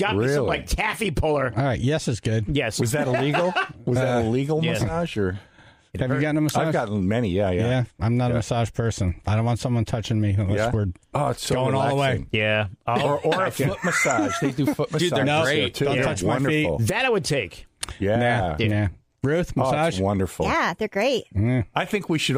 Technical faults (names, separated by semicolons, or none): none